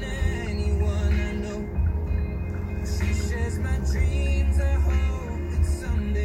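All the way through, there's a resampler restarted on every block: each 10 ms chunk converted from 48 kHz to 44.1 kHz in isolation, leaving edge errors that buzz at 100 Hz under the sound.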